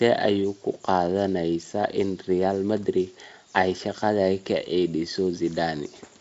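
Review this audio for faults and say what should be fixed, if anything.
Nothing stood out on listening to this speech, and there is nothing that needs fixing.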